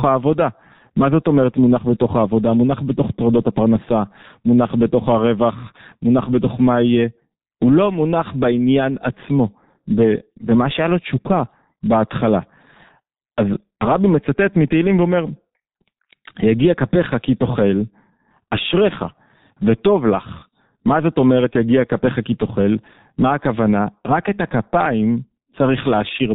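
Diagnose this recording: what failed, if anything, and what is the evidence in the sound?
The codec stage is the culprit: the whole clip carries heavy G.723.1 codec damage. Everything above 4 kHz is gone, so the speech sounds dull and rasping, and consonants smear because the coarse, slow-updating model fits a bitrate of around 6 kbit/s.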